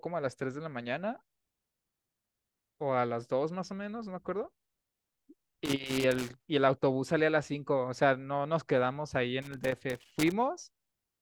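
Twice in this speech a rough, irregular scratching crackle breaks through: from 5.65 to 6.45 s, and again from 9.42 to 10.32 s, each burst lasting under a second. This is loose connector crackle. A worn or dirty contact somewhere in the cable path is making and losing connection as it shifts, so the signal is chopped on and off many times in quick succession, and any DC on the line turns each break into a pop.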